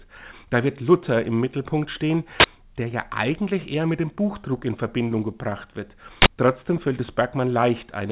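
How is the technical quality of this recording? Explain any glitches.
Two loud glitches stand out, both from an uninitialised buffer. The audio is band-limited, with nothing above 4 kHz, as a narrowband call path would give. The bursts occur at 2.4 s and 6.22 s, each lasting 40 ms. Each time, a block of audio was played out before any samples had been written into it. Whatever leftover data sat in that memory was read as sound. The result is a short, harsh blast of digital noise, much louder than the surrounding audio.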